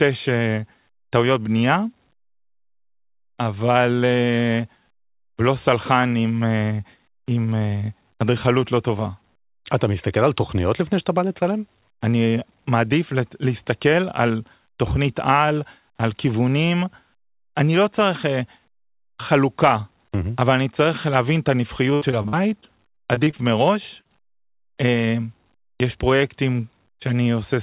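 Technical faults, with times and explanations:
21.94–23.41 s, repeated packet loss (robotic sound): over this one-and-a-half-second stretch the audio breaks up around ten times, the longest hole about 72 ms, with roughly a fifth of the span made up by the receiver continuing the last sound. Because the patches come one after another, the repeated, extended fragments give a choppy, mechanical, robotic texture with bits missing. This differs from an isolated dropout, which would sound like a single smear.
24.01–24.12 s, short concealed packet loss: two brief losses, each about 40 ms, occur back to back just after the robotic stretch. Each hole is filled by extending the preceding sound, as pitch where it was voiced or as shaped noise where it was not, and then blended back into the real signal. The result is a quick smear or wobble rather than sustained choppiness, and a short consonant could disappear. 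All of this sits on narrowband audio with nothing above 4 kHz, which fits a G.711 call path.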